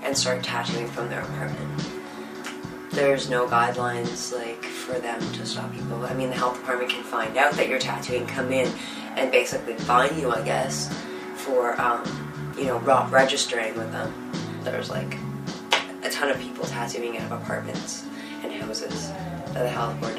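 No technical faults can be heard anywhere in the recording. There is nothing in the sound that calls for comment.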